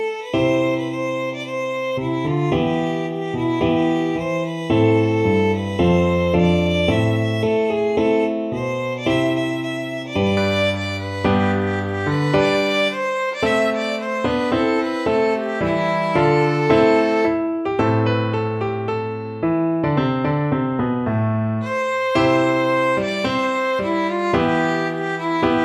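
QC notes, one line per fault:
0.0–10.37 s, channel delay (comb filtering): one channel runs roughly a third of a millisecond behind the other, and summing them to mono cancels shared content at evenly spaced frequencies. The first notch falls around 1.5 kHz, with more at about 3 kHz intervals above it, so the sound turns hollow and phasey. A spectrogram shows fixed horizontal dark bands at those frequencies, while the waveform envelope barely changes.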